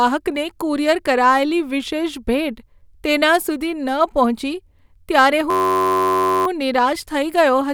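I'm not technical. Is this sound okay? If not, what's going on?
No. From 5.50 to 6.46 s the speech turns into a steady buzz: a system hang loop. The computer briefly froze and replayed one 10.7 ms slice about 90 times, which fits a 512-sample buffer. Unlike a crackle or dropout, the sound repeats exactly at about 94 Hz.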